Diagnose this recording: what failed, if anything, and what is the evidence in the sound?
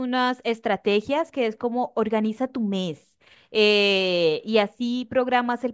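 No fault detected anywhere.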